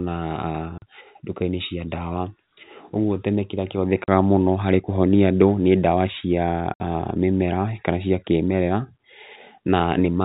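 At 0.78 to 0.82 s, at 4.04 to 4.08 s just after "ũguo tene kĩrĩa", and at 6.74 to 6.80 s, the speech drops out in packet loss filled with silence: gaps of 40, 40 and 60 ms, which fits 20 ms packets lost in runs of two and three. Each hole has hard edges. The waveform falls flat to silence, and the spectrogram shows blank vertical bars with thin broadband lines at both edges. The telephone-band G.711 coding cuts everything above 4 kHz.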